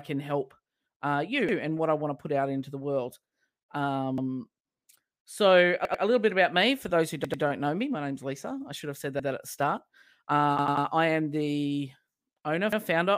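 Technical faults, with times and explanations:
1.49, 4.18, 5.85, 7.25, 9.20, 10.59 and 12.73 s, repeated buffer: a stretch of about 93 ms, which fits a 4096-sample buffer, plays again. It repeats once at most times, twice at 5.85 and 7.25 s (before "know me"), and three times at 10.59 s (before "I am the owner"). At 1.49 s it falls between "help uh you" and "and what I want". New audio arrived late, so the device replayed its last buffer. Each repeat gives a hard-joined stutter and delays what follows.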